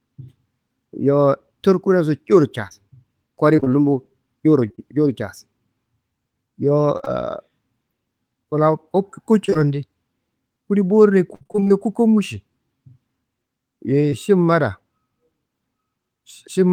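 Between 2.67 and 4.80 s come scattered short gaps: around seven brief losses, none longer than about 30 ms, adding up to 160 ms of missing speech. Each hole was patched by carrying the last sound forward, so the speech stays clear but picks up small ticks and smears. On a spectrogram, harmonics briefly freeze or blur into flat vertical slivers. The waveform shows tiny discontinuities where the patch rejoins real audio.

Repeated packet loss (robotic sound) hits three times. At 6.98–7.08 s, three gaps remove 60 ms, and concealment fills 43% of the span. At 9.46–9.57 s, three more gaps remove 60 ms, with 46% filled. The worst is 11.35–11.72 s: eight gaps totalling 200 ms, the longest 61 ms, with 57% of the span synthesised. The holes come so close together that the speech turns choppy, with pieces missing. A spectrogram shows stuttering, smeared harmonic bands broken into blocks. The waveform shows repeated, near-periodic chunks.

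At 14.10–14.14 s, a short concealed packet loss drops 20 ms. The decoder extended the preceding sound and blended back in, giving a quick smear or wobble. A spectrogram shows one thin stretched column, and the waveform shows a small seam at the rejoin.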